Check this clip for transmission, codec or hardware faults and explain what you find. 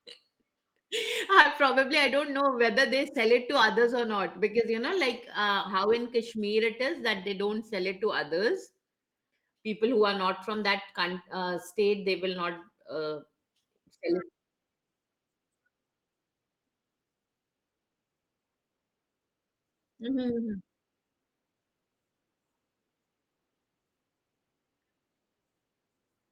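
One transmission fault can be heard in this speech.

Short concealed packet loss occurs at 1.41 to 1.47 s, just before "probably I don't know". About 40 ms of audio failed to reach the decoder in time, and the receiver covered roughly 33 ms of the gap by extending the preceding sound before cross-fading back into the real signal. The result is a brief smeared wobble, with the patched sound blurred for a moment rather than cleanly articulated.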